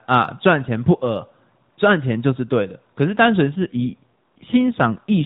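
From 3.56 s to the end, the speech turns rougher and more synthetic, which fits an AMR rate drop from about 12.2 to 5.9 kbps. Unlike a dropout or bandwidth switch, there is no gap and the narrowband AMR-NB band stays unchanged; only fewer bits remain for the voice.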